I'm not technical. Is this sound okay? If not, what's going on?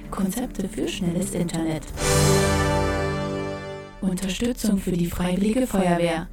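No. Throughout the clip there is a channel delay (doubling). One side of the stereo signal arrives about 46 ms later than the other, and when the two are combined into a single channel you hear each sound twice: the original and an equally loud copy just behind it. That gap is long enough to register as a quick slap echo rather than a blur. The delay fits a 2048-sample buffer holding back one channel.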